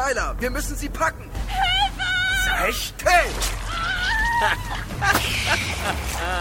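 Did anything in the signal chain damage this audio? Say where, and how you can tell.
No, nothing in the chain audibly damaged this audio, and no stage leaves a mark to point to.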